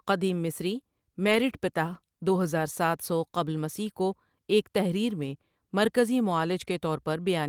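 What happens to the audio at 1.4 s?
A lost packet rebuilt from error correction runs from 1.23 to 1.41 s, between "قدیم مصری" and "پتاہ دو ہزار ساتھ". Several packets went missing, but each following packet carried a low-bitrate copy of the one before it, and the decoder played those copies in their place. About 100 ms of speech is rebuilt this way, so there is no gap. That stretch sounds rougher and noisier than the surrounding audio.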